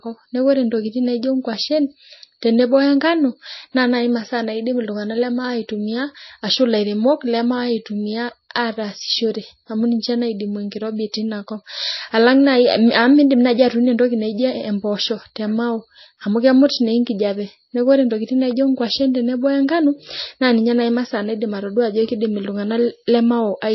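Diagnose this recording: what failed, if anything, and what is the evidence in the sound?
The codec stage failed, most likely through MP3 compression. Throughout the speech, nothing is present above 5.8 kHz, and the sound has a watery swirl with smeared onsets, which fits a low bitrate near 24 kbps. A plain low-pass filter would dull the sound without the flickering, chirpy texture left when weak frequency lines drop in and out between frames.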